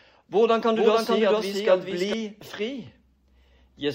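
From 0.75 to 2.13 s a copy echoes about 400 ms behind, roughly 5 dB quieter: a doubled audio track, likely a slower second capture or misaligned edit.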